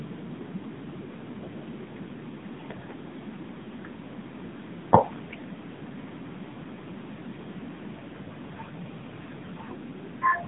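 Speech heard through an AMR narrowband mobile codec for the whole clip: nothing above 3.8 kHz, a 150 Hz to 3.6 kHz line band, and plainly buzzy, synthetic coding damage fitting a mode near 8 kbps.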